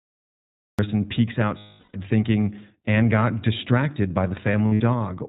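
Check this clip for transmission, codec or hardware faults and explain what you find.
Three faults are present: iLBC coding throughout, a cut-off start, and two bursts of lost iLBC frames.

The whole clip carries plainly audible iLBC codec damage. Nothing above 4 kHz survives, so the speech is narrowband. It sounds rough and slightly synthetic. Each short frame is coded on its own. The quality fits the 15.2 kbps mode with 20 ms frames.

The audio has a cut-off start. There is digital silence from 0 to 0.79 s, then sound begins abruptly at 0.79 s. The recording or stream started late. The speech enters mid-sound, with no natural attack or fade.

Lost iLBC frames occur twice. From 1.58 to 1.96 s, about 360 ms is missing. The decoder repeats the last pitch cycle mixed with noise, so the gap sounds like a held, buzzy vowel. After "got distracted by", from 4.52 to 4.81 s, 140 ms is lost. The losses are scattered over 280 ms, with the longest run around 70 ms. 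The voice recovers almost at once because iLBC frames stand alone.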